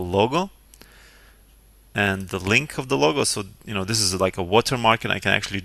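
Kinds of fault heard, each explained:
Compressed frames skipped: whole frames of the encoded stream never reach the output, either lost from the file or rejected by the decoder as corrupt, so playback jumps forward by their duration. At 4.19 s the sound leaps ahead by roughly 20 ms, which fits about two 10 ms frames dropped together. The join is over in well under a hundredth of a second, heard as a single abrupt discontinuity where the material on either side no longer lines up in time.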